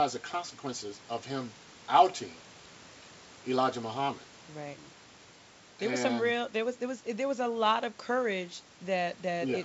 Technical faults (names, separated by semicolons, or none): none